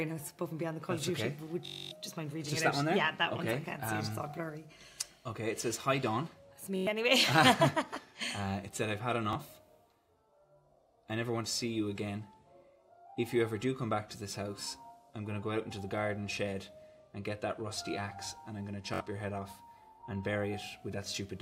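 There's Bluetooth stutter at 1.66–1.91 s, 6.76–6.87 s, 9.33–9.35 s and 18.94–19.01 s, where packets went missing and the receiver looped its last short slice. You get a repeat lasting 256, 107, 21 and 64 ms, a buzzy machine-gun stutter in the longer ones, then the audio jumps ahead as if it had kept playing.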